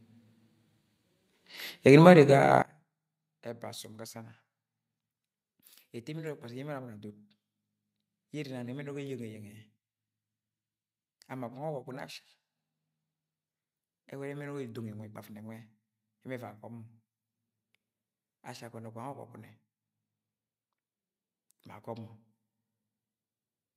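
From 2.62 s to the end of the speech, the mono sum collapses. The level drops by about 21 dB. The centred voice and its low end nearly disappear. What remains is a faint copy of the speech. This is likely one channel inverted. One side of the stereo pair has its polarity flipped. When the channels are summed, everything they share cancels. Only the small difference between them survives.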